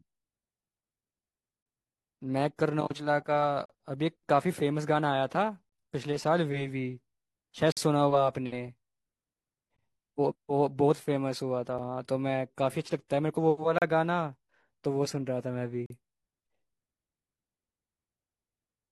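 Timestamps of consecutive 2-second stream segments leave a gap between stream segments, which the player fills with silence. The speech cuts out with hard edges at 3.66–3.70, 7.72–7.77, 13.78–13.82 and 15.86–15.90 s, 34 to 48 ms each, though no audio is lost.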